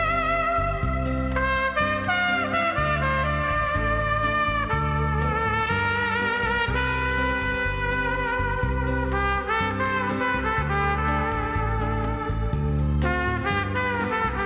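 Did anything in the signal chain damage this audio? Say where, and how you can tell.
No, nothing along the chain seems to have harmed this one, so there's no stage to point a finger at.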